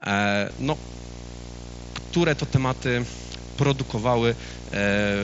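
Video or display buzz runs from 0.50 s to the end of the speech. A screen or video cable is leaking into the audio path, leaving a 60 Hz field-rate buzz topped with hash, roughly 15 dB below the speech. The top end stops near 7.7 kHz, which fits a wideband Bluetooth headset link.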